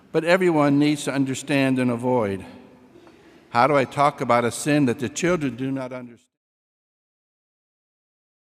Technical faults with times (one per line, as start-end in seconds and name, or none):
none